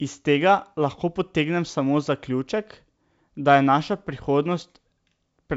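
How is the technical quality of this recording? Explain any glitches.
Nothing goes wrong in this one; it's wideband telephone speech carried by G.722 at 64 kbit/s, so the top end simply stops at 7.7 kHz, and there's no glitch to explain.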